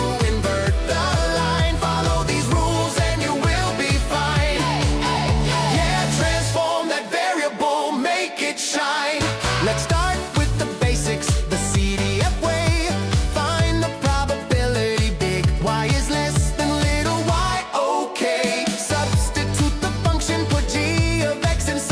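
No technical faults can be heard anywhere in the audio, and the signal stays steady and intact throughout.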